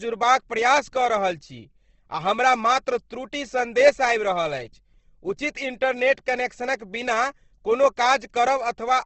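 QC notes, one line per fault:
Throughout, Opus compression: the speech has nothing above 8.2 kHz and sounds plainly rough and grainy. This is likely Opus in its CELT mode at a low rate, which fits about 16 kbps, where bit-starved bands are filled with folded or noise-like content.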